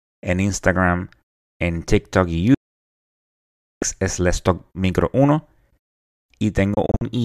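A speech clip with two digital broadcast dropouts. From 2.54 to 3.83 s the sound fades out within about 3 ms and stays silent for about 1.27 s. Between 6.74 and 7.04 s there are several short holes, 120 ms in total and none longer than 48 ms, which fits frames of about 24 ms failing and being muted. The audio returns later, so what was sent during the gaps is lost. Unlike an analogue fade or an internet stream's concealment, there is no gradual hiss or smeared fill, only hard near-instant silence.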